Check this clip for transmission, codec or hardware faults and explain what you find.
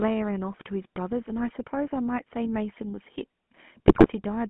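Two faults are audible: a GSM full-rate coding layer across the whole speech clip, and a short burst of GSM bit errors near the end.

GSM full-rate codec, throughout. The speech sounds like it went through the original GSM coder, which fits a 13 kbps full-rate stream. It models the vocal tract with a filter and excites it with a sparse, regularly spaced pulse train, discarding most of the excitation detail. The band runs only from about 150 Hz to 3.4 kHz, so the voice is thin and muffled, and the coarse excitation gives it a plainly audible buzzy, gravelly roughness.

GSM bit errors, 3.88 to 4.09 s. For about 0.2 s, corrupted bits reach the decoder, and the damage points to around eight frames hit at a heavy error rate. Wrong filter, pitch and gain parameters warp the spectral shape and throw the level around from one frame to the next, so the speech breaks into squawks, pops and a gargling sound before the clip ends.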